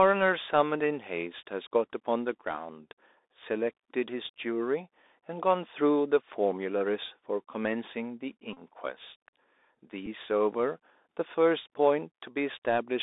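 The whole clip has that Bluetooth CVSD headset codec sound. The speech is squeezed into a phone-style band of roughly 300 Hz to 3.7 kHz, so it's thin with no air up top. The one-bit-per-sample delta coding, which fits the 64 kbps headset link, clearly can't keep up its step size, so sibilants come out scratchy and there's a grainy hiss sitting under everything.

At 8.53 to 8.58 s there's a Bluetooth headset packet repeat. About 34 ms of audio went missing over the air, which fits a run of roughly nine lost packets, and the chip kept re-decoding the last good one. Repeating the same 3.75 ms chunk over and over gives a short, steady buzz near 267 Hz until clean packets return. It happens again at 10.06 s, but this time it's only about 7.5 ms, likely two packets' worth, so the buzz is very brief.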